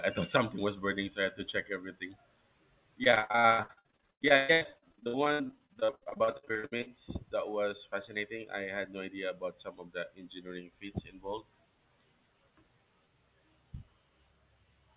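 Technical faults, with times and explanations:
3.04–6.90 s, repeated packet loss (robotic sound): dozens of dropouts up to 120 ms, about half this stretch patched by repeating the last sound, hence choppy with pieces missing.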